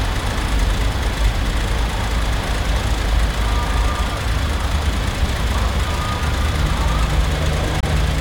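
A Bluetooth dropout hits this recording of sounds between 7.80 and 7.84 s, near the very end, where the audio cuts out to silence for about 35 ms and then returns as though it had kept running underneath. The likely cause is a wireless audio packet that failed to reach the headphones in time and was discarded, leaving a hole in the output. The missing stretch fits the loss of a single frame of roughly 21 ms.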